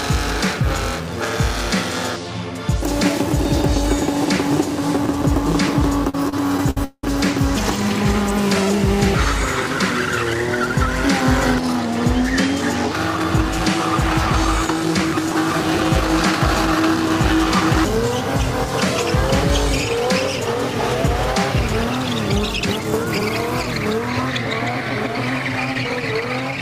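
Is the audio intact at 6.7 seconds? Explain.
No, 6.7 s sits inside a run of repeated stalls (stutter) from 6.09 to 7.04 s. Packets arrived late, the jitter buffer kept emptying, and the receiver stretched the last sound through six gaps, the longest 187 ms. Nothing's lost, but it drags and stutters.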